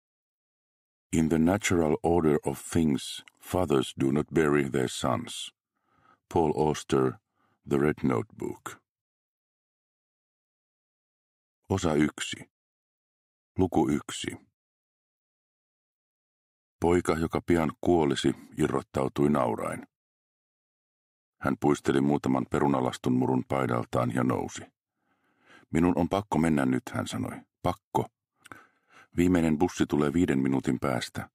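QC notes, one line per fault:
No faults found on audition; nothing to log.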